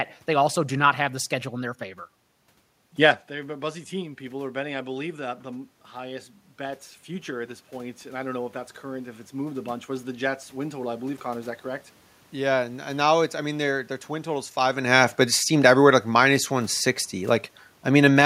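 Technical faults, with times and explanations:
14.73 to 18.21 s, automatic gain falling: the gain control judged the input too loud or its background noise too strong and pulled its gain down gradually, by about 4 dB over these final three and a half seconds. Because the whole signal is scaled, the speech and the room noise behind it sink together, which sets this apart from the talker's own shift in distance from the microphone just before, around 14.5 s, where only the voice changes level.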